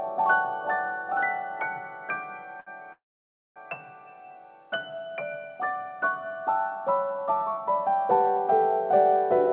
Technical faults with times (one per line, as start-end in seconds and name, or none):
2.60-2.68 short stall from a late packet
2.92-3.58 call audio freeze